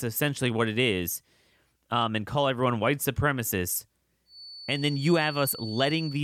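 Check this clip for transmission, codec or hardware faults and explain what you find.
One fault is present: a feedback whistle from 4.24 s to the end at 6.23 s. A thin, steady 4.5 kHz tone sits roughly 15 dB below the speech, swelling and fading slowly in level. The likely cause is a loudspeaker-to-microphone loop held just at the edge of feedback, sustaining one frequency without runaway. On a spectrogram it shows as a narrow horizontal line at 4.5 kHz.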